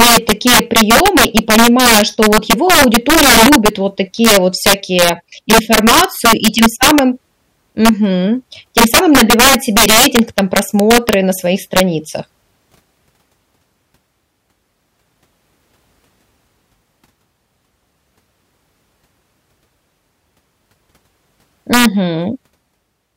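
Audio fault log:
0.00–3.68 s, 4.25–5.09 s, 5.50–6.99 s, 7.85–7.89 s, 8.78–11.14 s (ending just before "на своих"), 11.77–11.80 s (just after it), 21.73–21.85 s: integer overflow. Loud speech peaks drove the sum about 1 to 9 dB past the integer limit. Instead of being capped, the values wrapped to the opposite sign and flipped across the full range, producing violent cracks far harsher than clipping.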